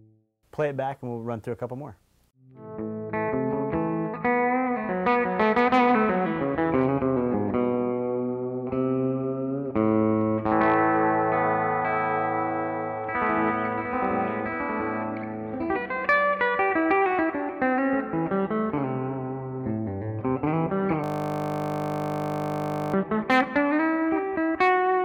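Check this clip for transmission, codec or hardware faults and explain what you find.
One fault is present: a system hang loop from 21.04 to 22.94 s. The machine or its driver stalled while the audio hardware kept replaying the same 20 ms of its ring buffer, giving a steady 50 Hz buzz rather than the irregular stutter or silence of a dropout.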